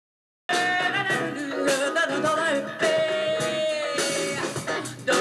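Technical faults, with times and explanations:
0.00 to 0.49 s, cut-off start: digital silence, then sound bursts in mid-stream at 0.49 s with no attack or fade, because capture began late.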